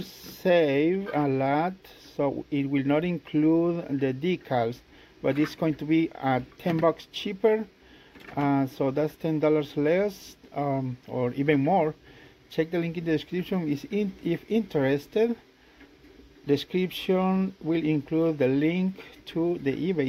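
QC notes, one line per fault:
No audible faults found anywhere in the clip.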